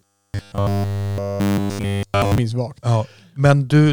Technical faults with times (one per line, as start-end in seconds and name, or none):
0.01-2.38 robotic sound from repeated short buffers